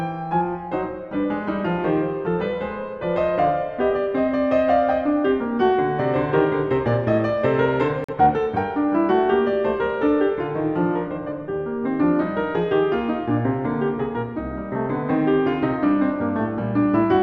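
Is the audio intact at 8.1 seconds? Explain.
No. The music cuts to silence from 8.04 to 8.13 s, a digital broadcast dropout: the receiver muted on failed data, a gap that fits one lost frame of 42.7 ms.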